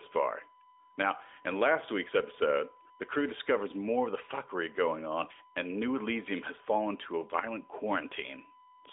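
A steady, fixed-pitch whine at 1 kHz sits under the speech for the whole clip, roughly 35 dB below it, heard through the narrow telephone band of the AMR-NB link. This is USB whine: the bus's 1 ms frame current leaking through power or ground.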